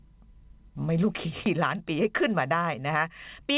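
Skip ahead at 1.46 to 1.48 s: the speech jumps forward with no gap, so roughly 0.4 s of it never plays and the sounds on either side of the cut butt directly together. Later audio was already queued when this stretch was discarded, either lost in transit or dropped by an overflowing jitter buffer, and playback resumed from the newer material. The jump shows up against the call path's narrow band, with nothing above 4 kHz.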